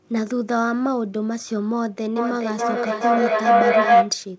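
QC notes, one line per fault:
2.16–4.21 s, feedback howl: a tone around 700 Hz swells out of the speech, pulsing roughly every 400 ms and peaking about 9 dB above it. Two devices in one room share the call, so each microphone-to-loudspeaker trip adds level, narrowing the sound to that frequency.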